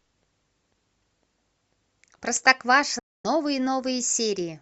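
At about 2.99 s the speech drops out cleanly and stays silent until 3.25 s, a hole of roughly a quarter of a second. That's a classic digital broadcast dropout. The receiver stopped getting usable frames, so it muted rather than play garbage. The gap is consistent with around eight frames going missing. The fade into the silence takes only about 3 ms, so it sounds like a sharp cut, and whatever was said during that stretch is simply gone.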